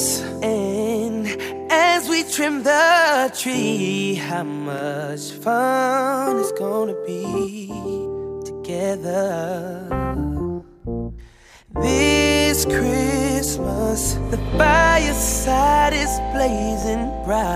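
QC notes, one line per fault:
4.78, 10.80 and 16.82 s: overlapping chunks. At each join, about 20 ms of sound plays twice because each new 6.0 s chunk starts slightly before the previous one ended, causing a brief stutter or click. This differs from a dropout or gap, where material is missing. Here nothing is lost and a short piece repeats. Random clicks would also land at irregular times, while these fall exactly 6.0 s apart, which points to fixed-length chunk processing.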